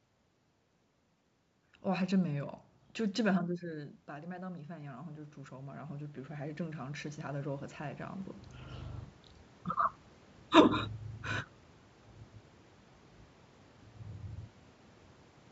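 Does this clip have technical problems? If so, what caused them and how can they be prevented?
Yes. From 3.61 to 8.27 s the automatic gain rises: the talker moves away from the microphone at about 3.5 s and the input drops by about 14 dB, so the gain control slowly adds about 14 dB to compensate. Over those 4.7 seconds the voice climbs back toward its earlier level, and the room noise swells with it, so the background grows audibly louder behind the speech. To prevent this, keep the talker at a steady distance from the microphone or give the gain control a cap on how far it can raise quiet input.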